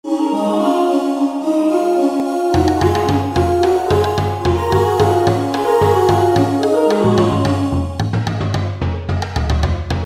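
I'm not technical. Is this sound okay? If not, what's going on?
No. At 2.20 s there is a block of digital silence: for about 0.67 milliseconds, a tiny stretch of the audio was replaced by zeros, meaning nothing at all. The sound drops to that silence and returns without any fade. Because the gap is far too brief to hear as a hole, it comes across as a small tick or dip.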